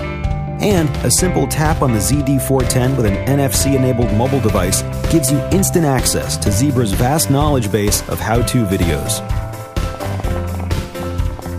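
Near the end of the audio there's a train of clicks from 9.95 s to 11.47 s: around fifteen similar-shaped pops at about 8.6 per second, spaced unevenly, and they poke out roughly 5 dB above the program material. That pattern of repeated pulses likely comes from something injecting them from outside, such as interference from nearby equipment or a dodgy connection or power supply.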